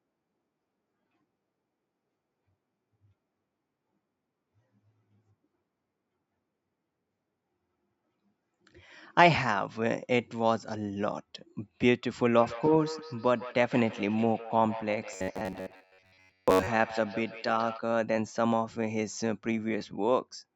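From 12.37 to 17.86 s, a second device in the same room on the call plays this microphone's signal aloud. The microphone picks it up again, and its own echo canceller cannot remove sound from another device. This produces feedback echo between two devices: each phrase returns roughly every 150 ms, at most about 14 dB below the speech, thinner and more ringing.

Between 15.13 and 16.67 s, new audio likely arrived too seldom, so the software repeated fragments of about 10.7 ms in place of most of the real signal. The result is robotic sound from repeated short buffers, a rigid, metallic buzz at 93.8 Hz that only loosely follows the speech.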